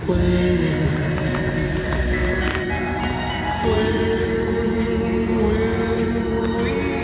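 No technical faults can be heard in these sounds. They come through a call path with nothing above 4 kHz, a narrow telephone band that fits a G.711 mu-law codec.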